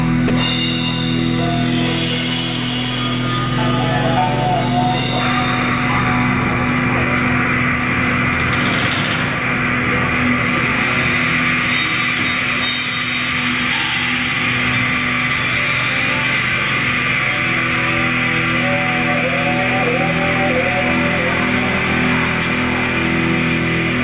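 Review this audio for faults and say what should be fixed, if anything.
Sound dropped by the voice detector, 0.28 to 0.30 s: for about 20 ms the sound gives way to flat, steady noise before the signal returns. The sender's voice detector most likely judged this brief stretch to be background and stopped transmitting, and the receiver filled the gap with generated comfort noise. The sound is already narrowband, with nothing above 4 kHz, which fits a G.711 mu-law call path at 64 kbps. To prevent this, lower the detector's threshold or add hangover time after speech ends, or disable discontinuous transmission for this stream.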